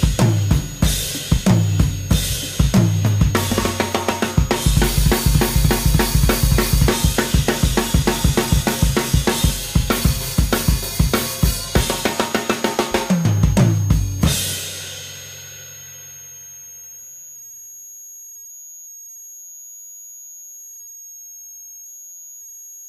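Throughout, a switching supply whistle sits roughly 20 dB below the sound, drifting between 6.5 and 6.8 kHz; that wandering pitch, unlike a fixed interference tone, reveals a load-dependent converter.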